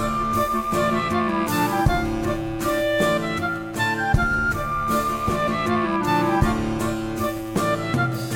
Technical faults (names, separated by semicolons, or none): none